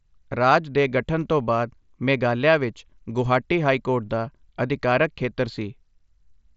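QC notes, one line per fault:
No faults are present in this speech clip. It carries the character of a Bluetooth mSBC headset link, with speech reaching up to about 8 kHz and only light codec texture on the louder passages.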